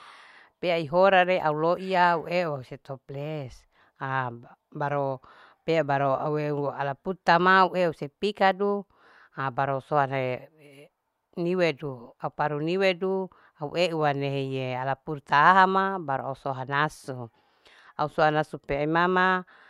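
Throughout, the resampler restarted on every block. Each 40 ms block was converted separately, likely 44.1 to 48 kHz, leaving edge errors heard as a 25 Hz buzz under speech.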